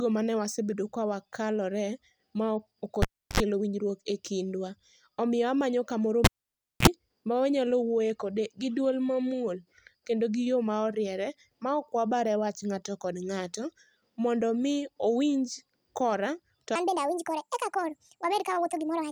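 Speech with two kinds of fault. The cable is pulled and plugged in twice, from 3.02 to 3.40 s and from 6.25 to 6.88 s. Each time a pop cuts the sound to near silence. The gap lasts 0.33 s the first time and 0.58 s the second. Then a short mains buzz is heard as the plug's tip makes contact before the plug seats. It runs 69 ms at 50 Hz first and 48 ms at 60 Hz second. A second pop follows as the sound returns. From 16.76 s to the end, the section plays at the wrong speed. It runs 1.54 times too fast. Speed and pitch rise together, lifting the speech by roughly seven semitones and making it high and hurried. The likely cause is a player or editor running this part against the wrong clock.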